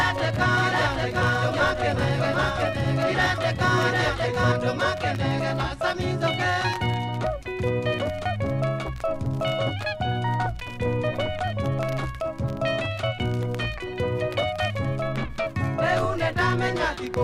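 A doubled audio track runs from the start to 4.52 s, where it cuts off abruptly. A second full-band copy trails the original by about 0.7 s at about 5 dB lower, dry and undecayed. It is likely a second capture through a slower path.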